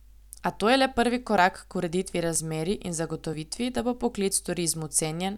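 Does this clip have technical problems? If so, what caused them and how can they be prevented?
Yes, there is audio missing between chunks. The recording chain likely processes the speech in blocks of about one second and drops a brief sliver, roughly 20 ms, each time it closes one block and opens the next. The two sides are butted together with no gap, so the speech skips forward at 0.40, 1.38 (between "to je le prvi" and "k ureditvi"), 2.36, 3.33 (just before "da bo") and 4.31 s (right after "da bo"). That is a steady interval of just under a second. Using overlapping or continuously streamed buffers, so that no samples are discarded at block boundaries, would prevent it.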